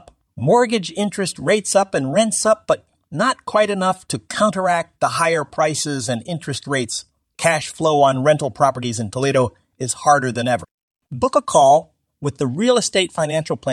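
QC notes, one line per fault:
Nothing to flag on this one, the speech comes through with no problems worth a line.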